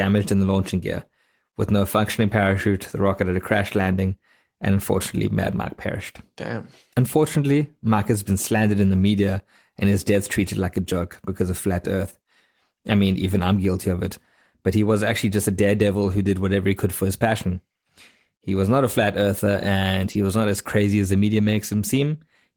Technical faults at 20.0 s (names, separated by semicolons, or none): lost packet rebuilt from error correction